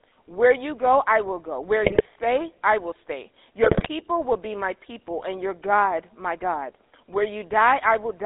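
Throughout, the speech carries the buzzy, gravelly roughness of the GSM full-rate codec, which fits its 13 kbit/s rate. The codec rebuilds the voice from a vocal-tract model driven by coarse, regularly spaced pulses, and the band runs only from 250 Hz to 3.7 kHz.

From 1.84 to 2.06 s and again from 3.64 to 3.89 s, GSM bit errors break the voice into squawks, pops and gargling. Corrupted filter, pitch and gain values distort the spectrum and make the level jump over a string of frames in each burst.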